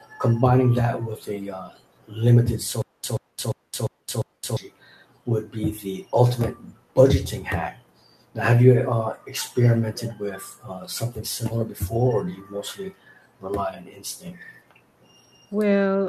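Speech, with a stutter with silent gaps between 2.82 and 4.57 s: a fragment about 132 ms long plays, drops into about 218 ms of dead digital silence, and returns, repeating five times on a steady 350 ms cycle. The stream likely stalled, replaying its last buffered fragment at each retry before running empty. Unlike a seamless loop or a simple dropout, this alternates identical bursts with true silence, and the speech that belonged there is missing.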